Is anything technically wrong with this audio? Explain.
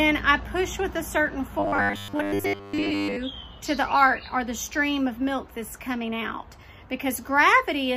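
Yes. From 1.59 to 3.16 s there is robotic sound from repeated short buffers. New audio likely arrived too rarely, so the playback filled the gaps by replaying its most recent fragment of about 10 ms, skipping the real material in between. This happens over most of that stretch. Looping a fragment that short imposes a fixed pitch of 100 Hz, so the sound becomes a stiff, metallic buzz that only loosely follows its original contour until normal playback resumes.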